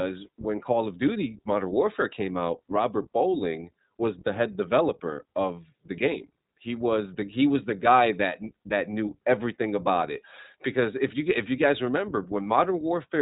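iLBC codec coding runs throughout: each 20 ms frame is coded independently, nothing above 3.8 kHz survives, and the speech sounds plainly rough, muffled and synthetic.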